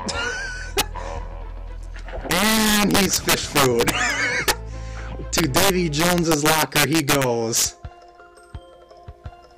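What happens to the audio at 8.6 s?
Nothing goes wrong at 8.6 s; the audio plays through that moment intact, with no dropout, click, glitch or other fault.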